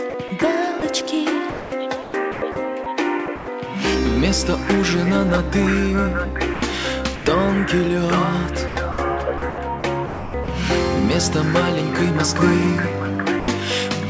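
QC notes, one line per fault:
0.10–0.82 s, 1.50–3.48 s and 8.68–10.48 s, sound chopped by the voice detector: the sender's detector likely kept switching transmission off and on, so quiet stretches were swapped for comfort noise, about 80 ms, 640 ms and 620 ms in total. The audio turns choppy.
6.54–6.62 s, 7.16–7.26 s and 13.40–13.48 s, sound dropped by the voice detector: the detector likely treated quiet sound as background and stopped sending, losing 80 ms, 100 ms and 80 ms. Each gap is filled with steady comfort noise until transmission resumes, heard against a band that stops at 8 kHz, which fits a G.722 call path.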